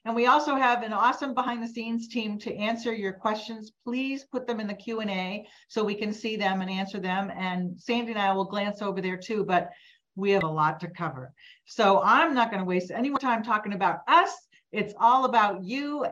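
At 1.47 s, 10.41 s and 13.16 s the audio breaks into a very short chirp, squawk, click or short hole, each lasting under 20 ms. This is damaged data in a compressed stream: corrupted bytes leave the decoder misreading a frame, losing sync and hunting for the next header.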